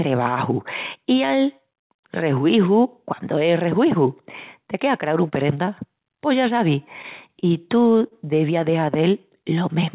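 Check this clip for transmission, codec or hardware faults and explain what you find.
Two kinds of jitter-buffer fault are audible: two brief late-packet stalls and one stretch of slowed playback. The audio passed through a call path whose band stops at 4 kHz, which fits G.711 mu-law at 64 kbps.

Short stall from a late packet, at 7.39 to 7.44 s just after "ya sabis" and at 8.07 to 8.13 s just before "deviás de". Each time a packet arrived late, so the receiver held the last sound for about 29 ms and then 40 ms until the packet arrived. Nothing is lost. A sound simply lingers with a slight buzz or dip, unlike a dropout, which cuts audio out.

Jitter buffer slow-down, from 8.84 to 9.60 s after "deviás de". To rebuild its reserve, the receiver repeated single pitch periods many times, adding about 78 ms and playing at 91% speed. The pitch stays the same while sounds drag, spread over the whole stretch rather than one held sound.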